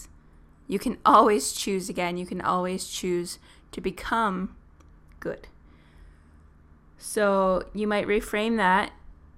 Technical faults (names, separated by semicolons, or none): none